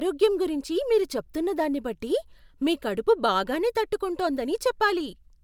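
No technical faults are audible.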